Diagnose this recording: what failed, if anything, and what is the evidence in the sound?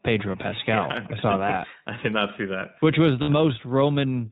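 At the codec stage, the speech was coded with the iLBC codec, and the audible roughness fits its 15.2 kbps mode with 20 ms frames. The low-bitrate narrowband coding cuts everything above 4 kHz, leaving the speech dull, slightly rough and synthetic throughout.

On the network side, packets went missing, producing lost iLBC frames at 0.32 to 0.36 s, which fits one 20 ms frame, and 3.22 to 3.30 s, about 60 ms or three frames. The decoder repeats the last pitch cycle with noise, so each gap sounds like a held buzzy vowel before the speech recovers immediately.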